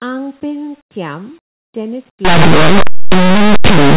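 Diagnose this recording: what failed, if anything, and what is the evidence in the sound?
From 2.25 s to the end at 3.97 s the speech turns into harsh, very loud distortion. This is a sample-format conversion fault: linear audio read as companded. The linear 8-bit samples are expanded as mu-law codes, so values just on one side of zero become the loudest outputs, while those on the other side stay small.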